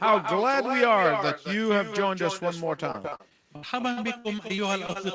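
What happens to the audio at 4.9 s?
Repeated packet loss (robotic sound) is still under way at 4.9 s, in a stretch running from 2.76 s to 4.97 s. Packets kept going missing or arriving late, and each hole was patched by stretching the last sound, with gaps up to 60 ms. About 17% of the span is filled in this way, giving choppy audio with pieces missing.

An echo with no canceller also runs underneath. The far end's loudspeaker feeds its microphone, so a copy about 6 dB quieter and thinner returns roughly a fifth of a second later.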